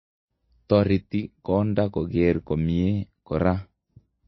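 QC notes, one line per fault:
Throughout, MP3 compression: likely a starved MP3 encode, which fits a bitrate near 22 kbps, cutting everything above 5.8 kHz and dropping weak components, leaving speech dull, watery and swirly.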